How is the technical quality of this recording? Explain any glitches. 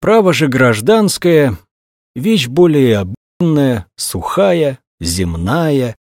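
The recording has one glitch, a playback stall. From 3.15 s to 3.41 s the sound cuts to silence for 259 ms, then resumes. The likely cause is the player running short of data or its thread being blocked, leaving the output empty until it recovered.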